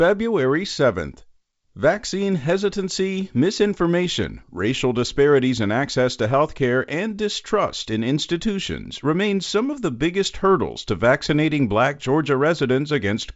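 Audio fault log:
No fault is heard in the speech, which carries the wideband telephone band up to about 7.7 kHz.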